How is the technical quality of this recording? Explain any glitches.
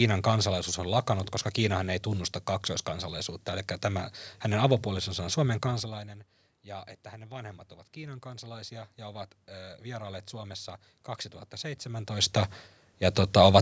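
There's one real glitch in this speech recording: the automatic gain rising between about 6.65 and 10.61 s. Just before that, around 5.5 s, the talker seems to move back, and the level at the mic drops by about 19 dB. The automatic gain control notices the quieter input and slowly raises its gain, by about 7 dB over roughly four seconds. You hear the voice and the room noise swell up together, a slow lift rather than a jump.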